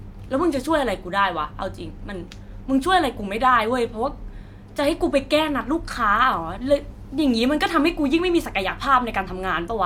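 No technical faults can be heard in the speech at any point, so there is nothing to describe in time order.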